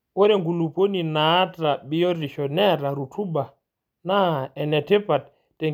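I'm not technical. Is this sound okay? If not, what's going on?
Yes, this sound is okay; nothing is going wrong with it.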